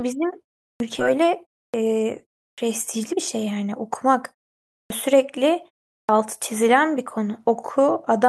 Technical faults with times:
0.75-0.80 clipped start after a pause
0.99-1.01 skip ahead
1.69-1.74 clipped start after a pause
2.53-2.58 clipped start after a pause
2.96-4.22 jitter buffer speed-up
4.74-5.89 jitter buffer speed-up
4.85-4.90 clipped start after a pause
6.04-6.09 clipped start after a pause

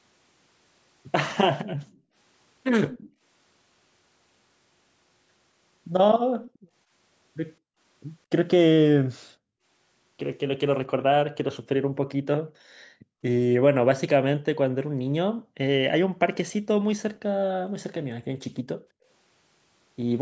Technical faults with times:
1.64-3.22 background gated by the echo canceller
1.84-3.11 echo leak
6.42-6.59 echo leak
6.59-7.79 background gated by the echo canceller
9.32-13.22 background gated by the echo canceller
14.83-16.19 background gated by the echo canceller
18.60-19.05 background gated by the echo canceller

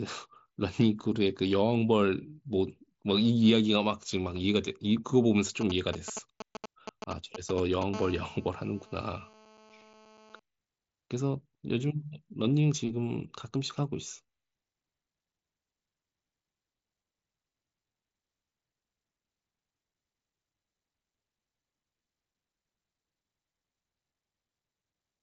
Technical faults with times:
5.61-7.83 GSM signalling bursts
7.94-10.40 GSM phone buzz

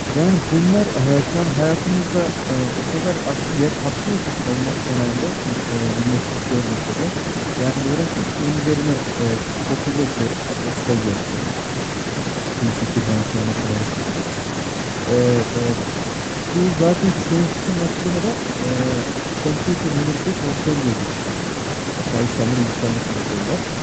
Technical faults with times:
none

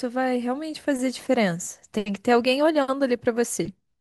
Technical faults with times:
none

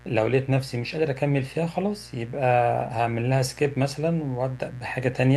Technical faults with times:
0.00-5.36 mains buzz

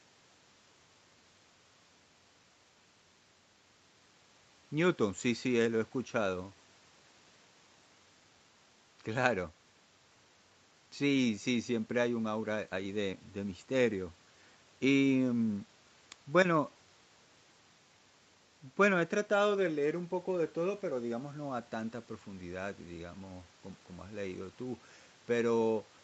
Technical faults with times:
none

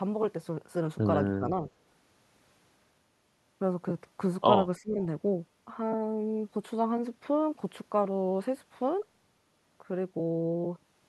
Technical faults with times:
1.37-1.45 speech suppressed in double talk
4.77-5.00 speech suppressed in double talk

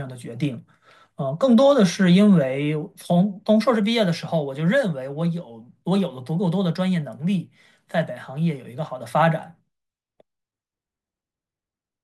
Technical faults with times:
none

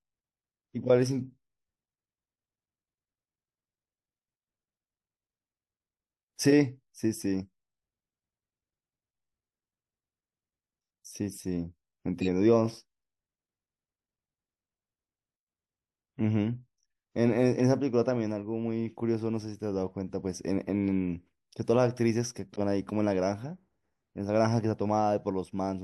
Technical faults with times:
12.20-12.28 corrupt frame decoded
22.53-22.60 corrupt frame decoded

